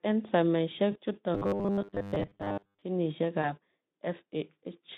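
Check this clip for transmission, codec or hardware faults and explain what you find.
Yes, two kinds of transmission fault turn up in this speech clip, both affecting the signal path rather than the light Speex coding of the 150 Hz to 3.7 kHz line band.

VoIP packet loss concealed by the speech codec occurs at 0.91 to 0.98 s, where 40 ms goes missing (consistent with two 20 ms frames), and at 3.41 to 3.52 s, where 20 ms is lost. The decoder stretches its last pitch and filter state with falling gain, so each gap becomes a brief, fading smear of stretched sound. The voice stays weak or distorted after it because each frame builds on the one before.

Robotic sound from repeated short buffers runs from 1.35 to 2.82 s, just after "ensaimisie chutok". A steady 100 Hz metallic buzz points to a 10 ms buffer being replayed, likely because fresh audio arrived too seldom, with most of that stretch repeated rather than new. 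Unlike concealment, it doesn't fade. It holds a rigid fixed pitch for about 1.5 s while loosely tracking the words.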